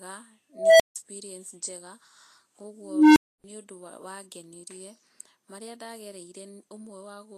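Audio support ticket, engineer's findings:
Hiss and graininess throughout, treble gritty, attacks smeared, damage plainly audible. Likely Vorbis compression: coarse treble quantisation turning fine detail into noise-like fill, which fits a low bitrate around 32 kbps.

Unstable filter, 0.53–0.96 s: tone around 700 Hz swells over about 0.27 s, clips, then 160 ms of dead air. Recursive filter with bad coefficients blowing up, overflowing, cutting out until reset.

Unstable filter again, 2.79–3.44 s, right before "nĩ ũndũ wangenĩrie": lower squeal around 300 Hz, slower build of about 0.37 s, then a 280 ms dropout. Same runaway-feedback mechanism, different coefficients by the sound of it.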